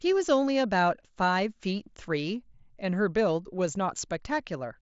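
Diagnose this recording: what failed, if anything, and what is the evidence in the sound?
Nothing failed in this recording, and the sound gives no evidence of a fault at any stage, with the speech carried over a Bluetooth mSBC headset link that stops near 7.7 kHz as that path should.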